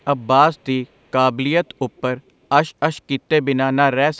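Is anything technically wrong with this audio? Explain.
Yes. An echo leak appears at 1.66 to 1.74 s, 1.96 to 2.01 s and 2.26 to 2.31 s: brief, very faint scraps of the speech returning about 384 ms late, roughly 35 to 40 dB down. This is likely a loudspeaker echo that the far end's echo canceller failed to fully remove before sending it back.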